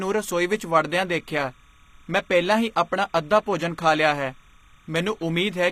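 Speech runs the whole clip with a steady chirping warble behind it, switching between pitches around 1 kHz and 2 kHz, an octave apart, at roughly 35 dB below the speech. This is timecode bleed: linear timecode at 30 frames per second leaking in from a neighbouring track or cable. Throughout, the treble also sounds plainly processed rather than natural, with upper harmonics that don't line up with the lower ones and nothing above 15.5 kHz. This is likely HE-AAC compression at a low bitrate, consistent with about 24 kbps, where spectral band replication rebuilds the top end from copied lower bands.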